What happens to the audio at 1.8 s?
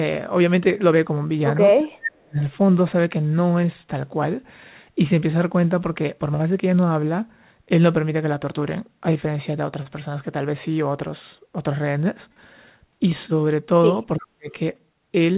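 From 1.79 to 2.39 s the speech is turned down, dropping by roughly 35 dB for about half a second in total. This is likely speech suppressed in double talk. The echo canceller mistook the talker for loudspeaker echo while both sides spoke.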